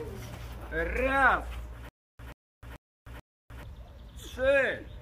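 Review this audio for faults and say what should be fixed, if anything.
From 1.89 to 3.63 s, a 0.13 s burst repeats four times with 0.31 s of dead silence between: stutter with silent gaps, likely a stalled stream replaying its last fragment. Deeper buffering and recovery that resumes from the current position rather than replaying the last fragment would prevent it.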